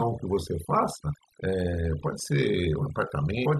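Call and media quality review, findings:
Overdone noise removal, throughout. Near-silent background with twinkling specks. Component: noise suppressor set too aggressive. Bands near its noise estimate are gated down or off, taking quiet speech detail with them.

Damaged data in a compressed stream, 1.12–1.16 s. Short glitch about 40 ms long. Component: codec bitstream/decoder. Corrupt frame bytes misread; decoder loses sync and hunts for the next frame header.

Same fault, 3.42–3.46 s. Another 40 ms glitch near clip end, from the same desync and frame-header search.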